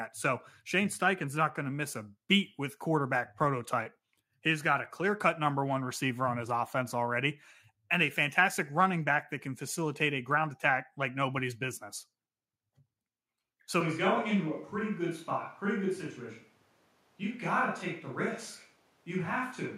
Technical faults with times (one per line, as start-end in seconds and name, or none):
13.81-19.78 switch to a distant microphone